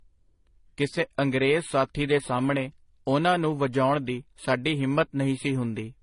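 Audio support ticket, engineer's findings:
Speech, entire clip. Transcoding between lossy codecs. Hard band limit, nothing above 10.6 kHz. Dull, smeared top end with two layers of coding damage heard together. Sound fits a low-rate HE-AAC encode, around 20 kbit/s, likely re-encoded to MP3 around 40 kbit/s. The MP3 stage spends its bits on the inherited artefacts and adds its own. The lowest cut-off in the chain remains.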